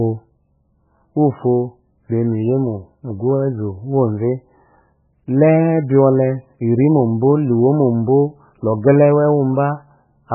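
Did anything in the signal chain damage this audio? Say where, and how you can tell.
Yes, at the codec stage, across the whole clip. The speech stops dead at 2.9 kHz and sounds watery and swirly, pointing to likely MP3 compression at a very low bitrate, around 8 kbps. Starved of bits, the encoder chops the treble and lets weak frequency lines flicker between frames.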